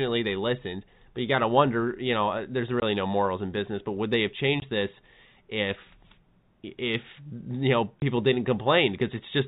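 Telephone speech in G.711 coding, band-limited below 4 kHz, with packet loss filled with silence. Three 20 ms holes cut the sound. The first is at 2.80 s, after "you know uh there's". The second is at 4.60 s, after "would they have". The third is at 8.00 s, after "if you know". Each gap fits a single lost packet replaced by silence. Its edges are hard.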